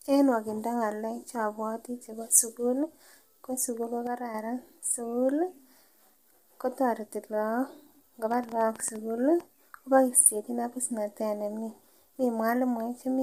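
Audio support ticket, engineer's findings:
Low-delay AAC compression, throughout: speech rough and grainy, noise between harmonics, synthetic-sounding top band. Short frames smear pitch detail; likely AAC-ELD at a bitrate fitting about 32 kbps.

One channel drops out, 4.07–4.34 s: level falls abruptly by about 6 dB, then recovers. Likely a lost stereo channel, leaving only half the mono sum.

Train of clicks, 8.32–9.41 s: about ten similar pops at an uneven 9.2 per second, peaking a few dB above the speech. Likely interference or an interface fault injecting pulses.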